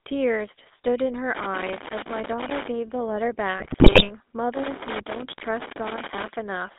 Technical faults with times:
0.00-6.78 GSM full-rate codec
1.35-2.68 loose connector crackle
3.58-4.10 GSM bit errors
4.54-6.34 loose connector crackle

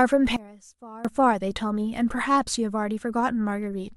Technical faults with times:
0.36-1.05 sudden gain jump

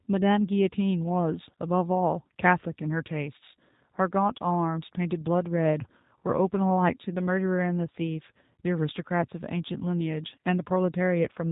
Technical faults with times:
0.00-11.51 G.729 codec

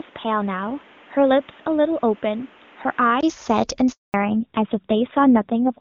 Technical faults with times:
0.00-3.23 input switched to a poorer device
3.92-4.14 handover gap
4.14-5.80 fallback to narrowband

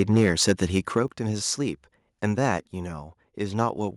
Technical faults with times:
0.00-0.98 microphone overload
1.08 microphone volume stepped down
2.58 microphone volume stepped down
3.60-3.63 microphone overload

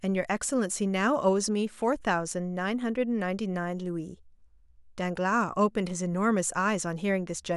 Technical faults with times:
none

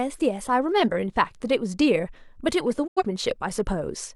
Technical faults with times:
2.86-3.03 digital broadcast dropout

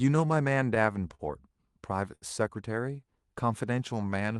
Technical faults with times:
0.00-4.40 clock drift between sender and receiver
0.16-4.27 repeated timing corrections
1.15-1.21 short stall from a late packet
2.15-2.24 short stall from a late packet

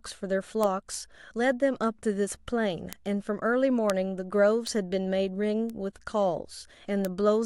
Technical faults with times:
0.63 bit error spike
2.93 bit error spike
3.90 bit error spike
4.67 bit error spike
5.70 bit error spike
7.05 bit error spike

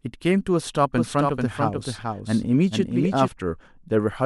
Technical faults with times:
0.98-3.28 doubled audio track

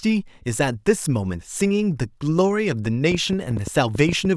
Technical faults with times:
3.12-4.26 train of clicks

